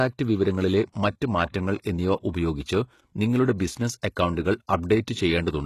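HE-AAC compression throughout this speech: treble sounds rebuilt, gritty and lispy, ending at 12.3 kHz, likely from spectral band replication at roughly 16 kbps.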